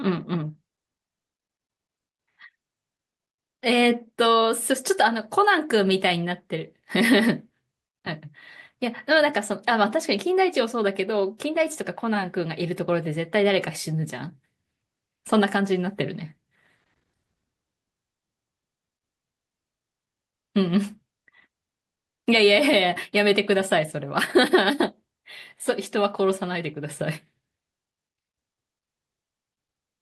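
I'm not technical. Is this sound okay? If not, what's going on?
No. At about 16.99 to 17.03 seconds there is a short concealed packet loss. A tiny piece of the call, around two hundredths of a second, arrived too late to be played. The receiver covered the hole by stretching out the sound just before it, then blended back into the real audio. What distinguishes it from a plain dropout is that most of the gap is filled rather than left silent, so you hear a quick smear or wobble.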